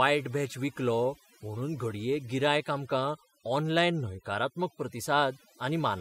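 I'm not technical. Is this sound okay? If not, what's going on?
No. This speech has overdone noise removal throughout. A cleanup tool was set too aggressively, so it switches off parts of the sound it mistakes for hiss. The background drops and breaks up into twinkling specks.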